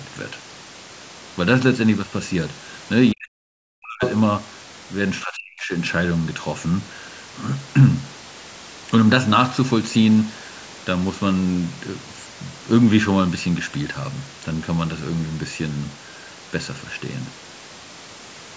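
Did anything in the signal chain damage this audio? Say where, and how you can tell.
Yes, the call processing stage. Speech suppressed in double talk shows at 3.12 to 4.02 s and 5.23 to 5.73 s, where the level drops by roughly 40 dB. Both sides were likely talking at once, so the echo canceller turned down the talker along with the echo. A network dropout would cut abruptly, but these dips come from gain reduction.

The other side's voice leaks through from 4.03 to 4.14 s, a brief scrap only about 5 dB below the talker. The echo canceller likely let loudspeaker sound back into the microphone. Room reverberation would trail the talker's own sound, but this is a separate voice.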